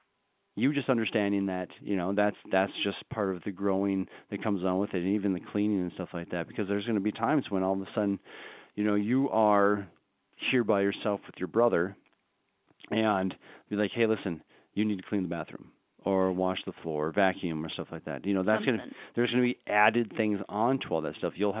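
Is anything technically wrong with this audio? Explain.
No, nothing's wrong here: it's speech coming through ordinary A-law G.711 telephone coding, so the narrow band topping out around 4 kHz and the faint hiss that rises and falls with the level are just how a standard phone line sounds.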